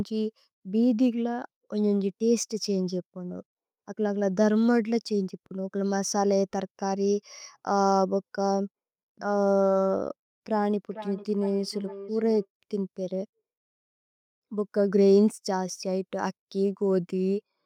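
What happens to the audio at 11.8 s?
At 11.8 s there is a feedback echo between two devices, from 10.9 to 12.48 s. Each word returns about every half second, thinner and ringing, peaking about 16 dB below the speech.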